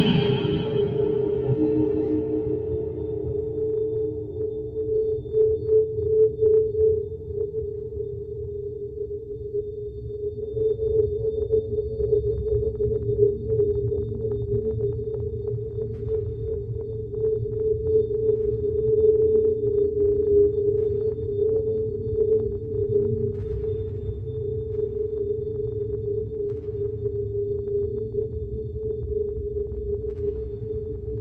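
From start to finish there's a noise suppressor applied to music or sounds, a speech-tuned one left running on material it wasn't built for. It treats steady tones and decaying tails as noise, so the level keeps ducking by around 5 dB whenever the sound settles, then bounces back on each new attack, giving a pumping and a thinned-out sustain. It's riding on a call path, where the top end stops near 12 kHz, which fits Opus at about 32 kbps.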